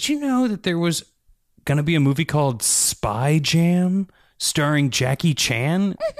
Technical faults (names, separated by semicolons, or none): sample clock jitter